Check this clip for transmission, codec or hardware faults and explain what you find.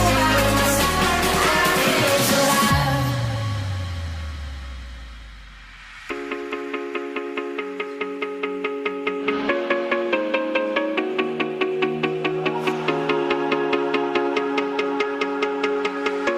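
I found no faults to report in this clip.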